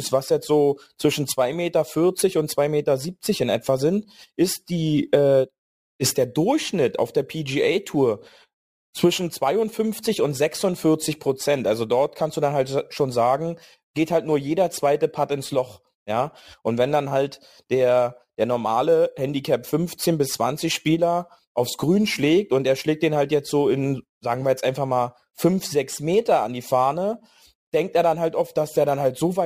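From start to finish, the speech carries crude rate conversion. Samples were dropped or repeated with no filtering, which fits a 48 kHz to 44.1 kHz change. The repeating error makes inharmonic tones, roughly 25 dB down, heard as a gritty fizz riding louder, brighter syllables.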